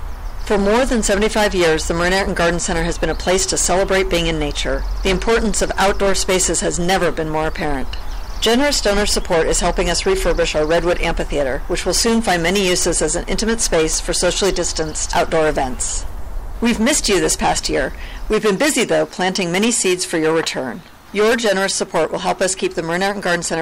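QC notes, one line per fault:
Throughout: hard clipping. The signal is driven about 20 dB beyond what a stage in the chain can pass, so the waveform's peaks are sliced flat, with roughly 15% of all samples cut off at that stage's limit. Those squared-off tops generate strong harmonics high in the spectrum, and at this degree of overload the result is a continuous harsh fuzz on every loud passage rather than occasional crackle on isolated peaks.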